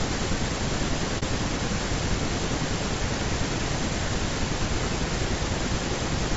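Speech with plainly audible codec damage throughout. The voice sounds rough and grainy. Noise fills the gaps between the harmonics, and the top band sounds dulled or synthetic. The likely cause is low-delay AAC compression, probably AAC-ELD, the codec used in video calls. Its short frames resolve pitch harmonics poorly and spend extra bits. The damage is strong enough to suggest a low bitrate, around 32 kbps. There is also a brief hole from 1.19 to 1.23 s. This is AAC frame loss with muting. The decoder received nothing for that stretch and zeroed its spectrum. The overlapping windows fade the sound out and back in. The gap lasts about 40 ms, which points to a single lost frame.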